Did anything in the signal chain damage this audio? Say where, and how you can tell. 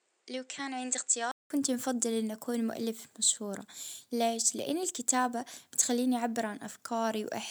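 Yes, likely an input switched to a poorer device. For the first 1.50 s the sound is about 5 dB quieter with nothing above 9.1 kHz, then a 0.19 s silence before "نفضل أن نكون مؤلف" leads into fuller sound. That gap and the change in tone and noise floor point to a device change rather than filtering.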